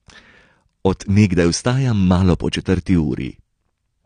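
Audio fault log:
Throughout, AAC compression: the speech sounds dull and smeared, with nothing above 9.8 kHz and a plainly audible warbling, fizzy texture on sustained sounds and sibilants, likely from AAC-LC coding at a rate that fits roughly 32 kbps. The encoder lowers its cut-off and starves or noise-fills bands it cannot afford. A plain low-pass filter would dull the top just as much but leave what remains clean, without this shifting swirl.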